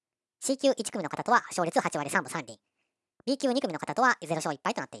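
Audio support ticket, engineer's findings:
Wrong sample rate, throughout the clip. Speech runs 1.5 times fast and sits about 7 semitones high, with speed and pitch shifted together. Fits 16 kHz material played back at 24 kHz with no resampling. Probable component: playback or output stage clocking at the wrong rate or a mislabelled stream header. The samples themselves are intact. Only the rate used to play them is wrong.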